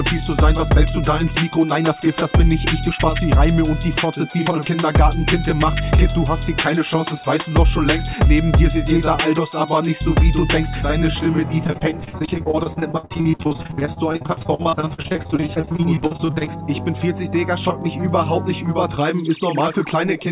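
From 11.64 to 16.5 s the audio breaks up into repeated packet loss with that robotic sound: lots of short holes, the longest about 59 ms, each covered by stretching the previous bit of sound, so roughly 37% of that span is concealment and it turns choppy. The whole thing stops at 4 kHz, which fits a G.711 A-law call path at 64 kbps.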